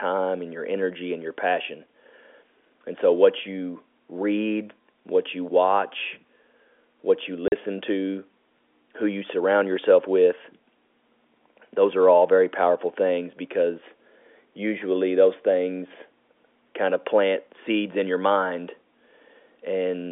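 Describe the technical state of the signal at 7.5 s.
At 7.48 s, just after "what you", the signal drops to dead silence for 40 ms until 7.52 s. This is packet loss filled with silence: the receiver had nothing to play for that stretch and inserted silence, and the gap length fits two consecutive 20 ms packets going missing. The abrupt cut into and out of silence leaves hard edges, over the narrow G.711 telephone band.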